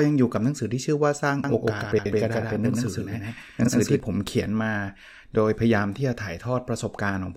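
From 1.44 s to 4.00 s the speech is likely being captured a second time through a slower path, producing a doubled audio track: an equally loud, full-band copy trails about 150 ms behind, with no decay or room colour, appearing and vanishing abruptly at both ends.

Within that stretch, neighbouring runs of frames were decoded in the wrong order, giving frames out of order at 1.92–2.06 s and again at 3.63–3.69 s. The halves of each stretch, about 70 ms and 23 ms, play exchanged, as a garbled flutter.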